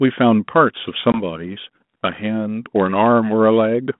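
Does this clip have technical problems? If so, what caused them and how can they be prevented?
Yes. There is packet loss on an ADPCM call at 1.12 s. A hard-edged hole of about 20 ms opens, the size of about one lost packet. The gap is filled with silence. The decoder's adaptive predictor and step size then drift out of step with the sender's. So the speech comes back slightly distorted. It settles by about 1.20 s. The G.726 coding at 32 kbit/s, with its 150 Hz to 3.6 kHz telephone band, carries light codec damage of its own. To prevent this, use a jitter buffer with loss concealment that also resets or realigns the decoder state after a lost packet.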